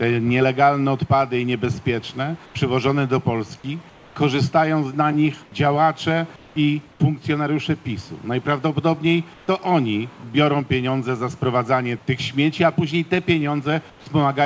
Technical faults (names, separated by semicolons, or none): comfort noise in place of the background